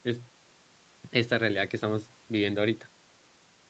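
No technical faults are audible.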